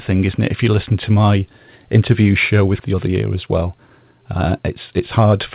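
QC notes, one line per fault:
2.8 s, skip ahead: Right after "to my interview show", about a second of audio is dropped. Playback jumps straight forward, joining both sides almost without a gap.
2.93–5.33 s, jitter buffer speed-up: The receiver trims short pitch-period pieces repeatedly, removing roughly a fifth of a second. Speech runs at 110% speed, same pitch, sounding hurried.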